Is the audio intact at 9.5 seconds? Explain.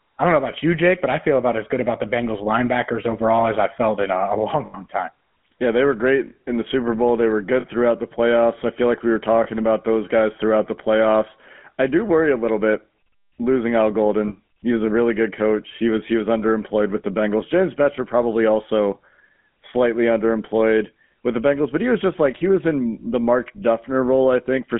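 No. Lost GSM frames from 9.44 to 9.47 s, just after "feel like we were" and before "about those guys throughout": one bad frame, about 20 ms, was filled by repeating the last good frame's settings, leaving a brief rough, metallic ring.

The whole clip also carries the GSM full-rate codec. It models the vocal tract and drives it with regularly spaced pulses, keeping only every third excitation sample, which fits a 13 kbps full-rate stream. The result is a plainly audible buzzy, gravelly roughness, within a line band of 150 Hz to 3.4 kHz.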